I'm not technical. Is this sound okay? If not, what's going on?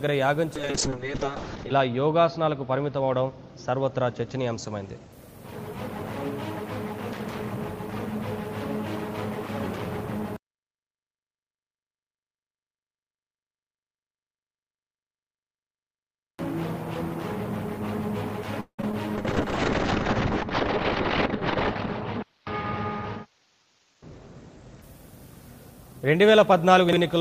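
No, there are several problems.

Call bitrate drop, 0.56 to 5.18 s and 19.16 to 24.88 s: the call's connection weakened, so far less detail was sent. The sound turns muffled and rough, then recovers.

Low bit depth without dither, 10.37 to 16.39 s: the audio was likely stored with only about three bits of precision. That makes everything grainy and gritty, and quiet parts break up.

Call audio freeze, 18.60 to 18.80 s: the data was likely held up in transit, so playback stalled. You hear a brief fading buzz, then about a tenth of a second of silence, and the sound resumes.

Short concealed packet loss, 18.82 to 18.84 s and 18.92 to 18.94 s: tiny bits of audio never arrived, and the receiver patched each gap with a guess. Each one is a quick smear or wobble.

Jitter buffer speed-up, 23.23 to 24.35 s: the receiver had a backlog and trimmed tiny slices to catch up. The sound plays about 12% faster at the same pitch and feels hurried.

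Chunks out of order, 26.89 to 26.97 s: a 40 ms piece of audio played one slot late. That brief moment sounds jumbled.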